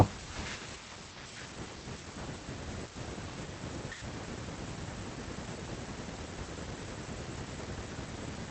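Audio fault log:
Nothing to log here; the speech comes across the call connection just as that link is meant to carry it, with the top end stopping around 8 kHz as the connection is set up to do.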